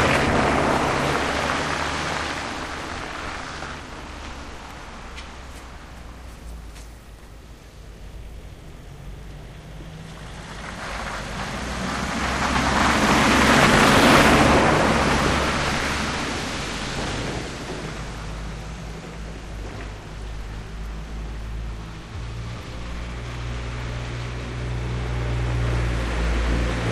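A recording of everyday sounds with no technical faults to report. Nothing in it needs a time or a cause pinned down.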